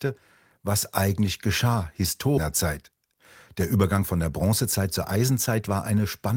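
A jitter buffer speed-up runs from 2.89 to 3.19 s and again from 3.76 to 5.93 s. The receiver's buffer had built up more speech than its target, so it trimmed away short stretches a pitch period or so long, over and over, roughly 50 ms in the first burst and around 200 ms in the second. The speech plays about 13% and then 9% faster at unchanged pitch, sounding rushed.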